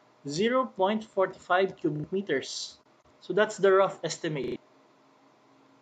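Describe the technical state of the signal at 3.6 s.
At 3.6 s the signal is intact, with no audible fault at that point.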